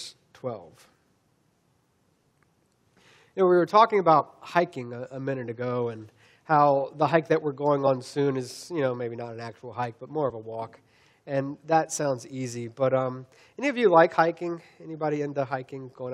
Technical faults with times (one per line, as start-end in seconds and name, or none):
0.93 damaged data in a compressed stream
4.19-4.21 damaged data in a compressed stream
7.86-7.88 damaged data in a compressed stream
10.29 damaged data in a compressed stream
14.13 damaged data in a compressed stream